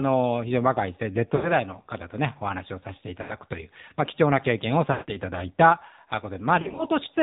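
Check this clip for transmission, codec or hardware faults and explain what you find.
Two faults are present: the speech has been carried through the AMR narrowband mobile codec, and it has lost AMR speech frames in four places.

The AMR-NB coder sampled the speech at 8 kHz and rebuilt it from a vocal-tract model excited by a handful of pulses per subframe, so nothing above 4 kHz survives. The damage is plainly audible across the whole clip: a muffled, band-limited tone with a buzzy, synthetic edge, consistent with a low mode around 7.4 kbps.

Lost AMR speech frames occur at 1.36 to 1.55 s, 3.22 to 3.35 s, 4.92 to 5.17 s and 6.62 to 6.85 s. In each case frames failed their error check and the decoder repeated the last good pitch and filter settings at decreasing gain. The first two gaps cover about 80 ms, which fits four frames, and sound like a smeared dip. The 160 ms gap at 4.92 s stretches the sound and fades it toward silence before it returns weak. 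At 6.62 s about 100 ms is lost in short runs of no more than 40 ms spread over 160 ms, which gives a broken warble.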